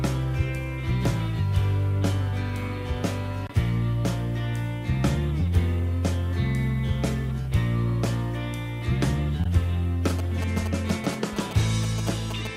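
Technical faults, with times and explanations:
10.10 to 12.47 s, GSM signalling bursts. A galloping dit-dit-dit of short buzzes cuts in, roughly 10 dB below the sound. A nearby 2G phone is signalling in brief radio bursts. The audio circuit rectifies them into a 217 Hz buzz.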